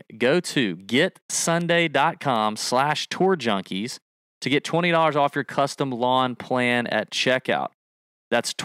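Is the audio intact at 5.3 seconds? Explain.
Yes, at 5.3 seconds the speech runs on cleanly, with no dropout, click or other fault to be heard at that moment.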